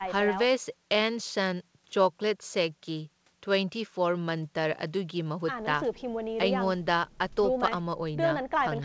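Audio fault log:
The speech comes through a call path coded with G.722 at 64 kbps, so its content stops at 8 kHz, and no faults are present.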